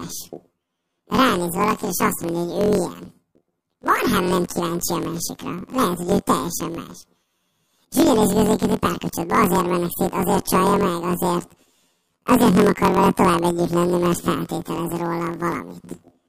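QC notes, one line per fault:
Throughout: planar audio read as interleaved. Each block of about 23 ms, which fits a 1024-sample buffer, plays twice at double speed, left half then right half. The speech sounds an octave high with a flutter at 43.1 Hz, while the overall pace stays correct.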